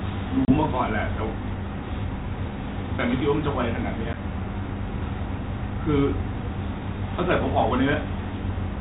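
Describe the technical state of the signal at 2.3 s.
At 2.3 s the signal is intact, with no dropout, clipping or other fault, only the light, band-limited character of the G.726 ADPCM telephone path working as intended.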